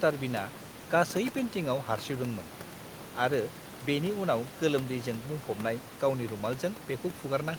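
Nothing in this speech recording stood out as a technical fault on listening, with only the room's own background noise sitting about 16 dB below the talking.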